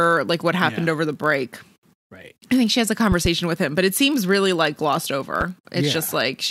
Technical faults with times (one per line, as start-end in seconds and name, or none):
0.00-6.50 block size mismatch (padded)
3.12-3.28 loud pop
5.41-5.43 loud pop